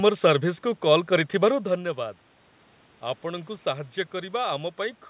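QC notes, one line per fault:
Nothing to log here, just the room's own background noise, the talker shifting position around 1.5 s, and the narrowband call path leaving nothing above 4 kHz, all as expected.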